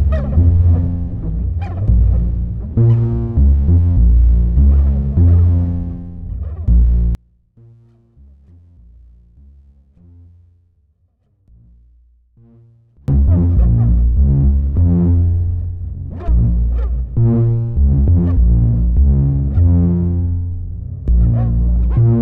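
From 7.15 to 13.08 s the level drops by about 33 dB, leaving a faint remnant. The likely cause is one channel inverted: shared content cancels when summed to mono. The waveform collapses almost flat, and the spectrogram empties.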